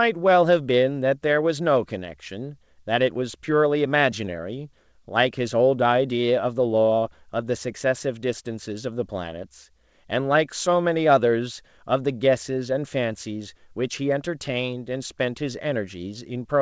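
There are no technical faults in this speech, which comes through a G.722 call path that carries nothing above 8 kHz.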